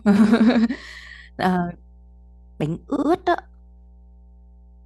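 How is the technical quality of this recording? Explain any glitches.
The recording has two technical faults: a constant mains hum and one brief stutter from repeated frames.

Mains hum runs throughout. Power-line interference, likely from a ground loop or nearby transformer, leaks into the signal path and shows up as a steady 60 Hz tone sitting roughly 30 dB below the speech, a low drone beneath every pause.

Repeated frames occur from 2.96 to 3.09 s. A short run of compressed frames was delivered more than once, so the decoder replays a 64 ms block twice over. The result is a quick stutter, stretching the audio by 128 ms.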